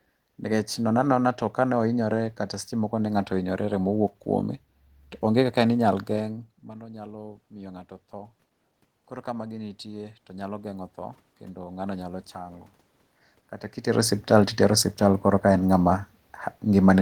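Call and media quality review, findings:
Automatic gain rising, 6.16–8.40 s after "kaka ne inyal" and 8.92–12.09 s: AGC climbing about 3 dB then about 6 dB after the talker moved back around 6 s and input fell about 17 dB. Waveform envelope and noise floor ramp up together.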